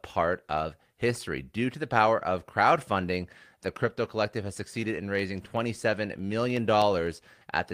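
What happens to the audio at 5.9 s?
At 5.9 s the speech carries a steady ticking, a click roughly every 0.125 s, or eight per second, heard only while the voice is sounding. These are periodic USB or driver dropouts, running from 4.32 s, just after "of crowdfunding the crypto", to the end of the clip. At that fixed interval a background task stalls the audio driver or USB transfer, and a little audio is skipped outright, so each splice makes a tick.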